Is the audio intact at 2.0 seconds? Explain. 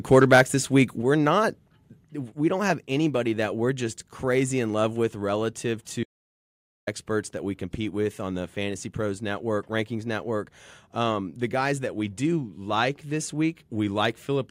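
No. At 2.04 s the microphone volume steps down. The whole signal drops by about 3 dB in one sudden step. Speech and background noise get quieter together, with no fade between the two levels. This most likely comes from the call software lowering the microphone's input volume. It would do so after judging the input too loud. The drop stays in place after that point, so the later audio sits lower than the start.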